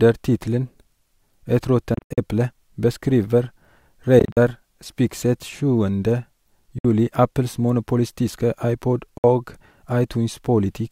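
Abrupt gaps of silence cut into the speech at 1.94–2.18 s, 4.19–4.37 s, 6.78–6.85 s and 9.18–9.24 s, each resuming as though it had played on: likely a Bluetooth dropout, with late packets discarded.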